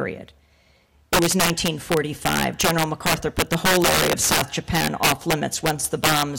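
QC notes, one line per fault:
Throughout, integer overflow: the signal was driven about 9 dB past the integer limit, and roughly 2% of samples went over it. Instead of being held at the limit, each of those samples wrapped to the opposite sign, jumping across the full range. The result is cracks on loud peaks, sharper than clipping. The waveform shows peaks that flip to the far extreme, and the spectrogram shows a broadband vertical streak at each peak.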